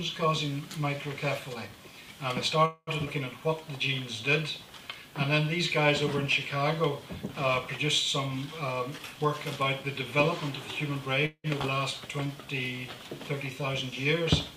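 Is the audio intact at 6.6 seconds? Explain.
Yes, the audio at 6.6 seconds is intact, with no dropout, click, distortion or other fault at that point.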